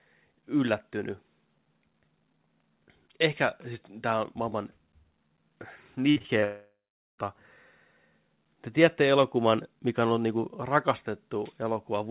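From 6.1 to 6.44 s the speech turns choppy and robotic: repeated packet loss leaves four short holes, the longest 58 ms, each patched by stretching the preceding sound, so about 36% of that span is synthetic fill rather than real signal.

From 6.44 to 7.2 s the sound first continues as a fading buzz, then drops to near silence for roughly 450 ms before speech resumes with the missing stretch gone, which points to a likely long network dropout rather than a pause in speaking.

Throughout, the narrow band with nothing above 4 kHz fits a G.711 mu-law call path at 64 kbps.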